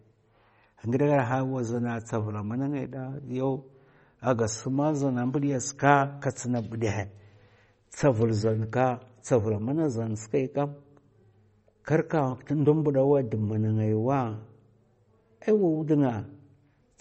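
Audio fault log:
Throughout, MP3 compression: nothing is heard above 8.3 kHz, and the speech has a plainly audible watery, swirly quality, with smeared attacks. This likely comes from a starved MP3 encoder, consistent with about 32 kbps, cutting the treble and toggling weak frequency lines frame by frame.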